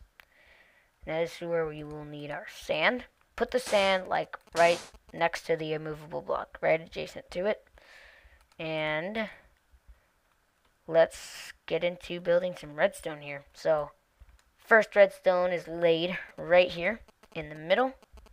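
GSM signalling bursts appear from 4.15 to 5.20 s and again from 16.14 to 18.28 s, running into the end of the clip. A nearby 2G phone transmitting short groups of radio pulses, as it does while signalling, gets rectified by the audio circuit, so the pulse envelope itself becomes audible. Each episode is a galloping dit-dit-dit of short buzzes at about 217 Hz, sitting roughly 25 dB below the main sound.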